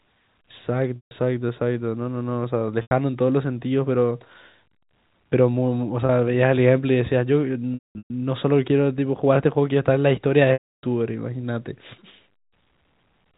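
Speech over a G.711 A-law telephone path, where a 4 kHz band limit and faint level-following quantisation hiss are heard, suffers packet loss with pitch repetition. The receiver fills gaps by repeating the last pitch period. The 30 ms dropout at 6.06 s and the 90 ms one at 2.82 to 2.91 s sound like a briefly held, buzzy tone. The 150 ms gap at 0.96 to 1.11 s, the 300 ms loss at 10.53 to 10.83 s, and the scattered 330 ms over 7.74 to 8.10 s (longest run 210 ms) fade to silence before speech cross-fades back.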